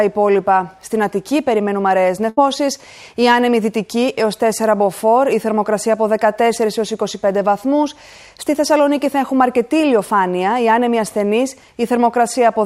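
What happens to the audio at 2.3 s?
At 2.29 s the sound briefly freezes: for roughly 76 ms the last moment before the gap is held and stretched while it fades in level, and at 2.39 s the audio picks up again slightly further along, with about 80 ms of the original simply absent. This is a burst of packet loss. Several consecutive packets never arrived in time, so the receiver concealed the hole by extending and attenuating what it had, then resumed from later material.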